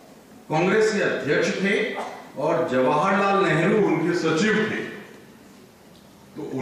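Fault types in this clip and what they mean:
Wrong sample rate: From 3.80 s the audio plays at 44.1 kHz instead of 48 kHz. Speed drops to 0.919 times normal, and pitch falls about 1.5 semitones.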